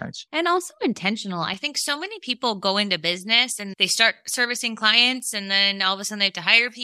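Pre-emphasis left on from 1.54 s, just after "also intentional", to the end: the treble lift applied for transmission was never undone by its matching de-emphasis, which fits a J.17 curve, leaving 10 kHz about 11 dB hot relative to 1 kHz, so the speech turns thin, bright and sibilant.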